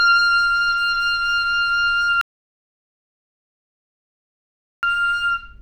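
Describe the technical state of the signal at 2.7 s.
At 2.7 s the signal sits inside an audio dropout to silence running from 2.21 to 4.83 s, most likely because the input was lost while recording continued. The sound cuts off into about 2.6 s of silence with no room tone, then resumes abruptly.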